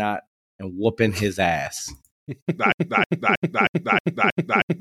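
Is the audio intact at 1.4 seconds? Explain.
Yes, the speech at 1.4 seconds plays through intact, with no dropout, glitch or other fault at that moment.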